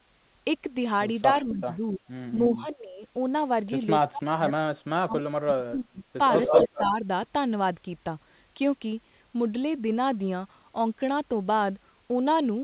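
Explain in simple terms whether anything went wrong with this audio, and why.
Speech suppressed in double talk: at 1.42–2.02 s, 2.51–3.03 s, 4.1–6.2 s and 6.64–7.05 s the voice sinks in level and partly drops out. Between 4.1 and 6.2 s it nearly vanishes. The likely cause is an echo canceller turning everything down while both sides talked at once.

Echo leak: from 6.35 to 6.85 s a second copy of the voice trails the original by about 0.18 s and sounds somewhat louder than it. This is likely sound from a loudspeaker that an echo canceller failed to remove.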